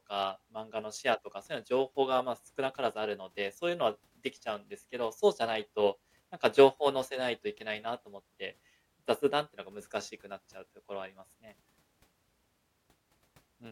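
No technical faults can be heard anywhere in the recording. There is nothing to mark at any point in the timeline.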